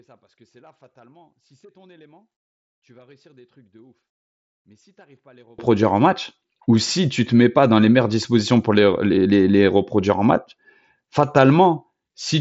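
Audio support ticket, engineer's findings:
One channel inverted, 0.00–5.59 s: speech drops about 35 dB in mono sum, only a faint residue left, full level back at "en match ou si". Likely one stereo leg polarity-flipped, shared content cancelling. mSBC headset band limit near 7.7 kHz audible throughout.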